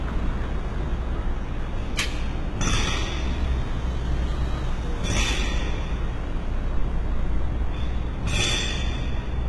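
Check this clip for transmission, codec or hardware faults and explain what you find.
One codec fault runs through the whole clip. HE-AAC compression, throughout: the lower spectrum is coded and the treble is likely rebuilt by copying lower bands upward, so the top sounds gritty and metallic, cut off above 11.8 kHz. The heavy damage points to a very low bitrate, around 16 kbps.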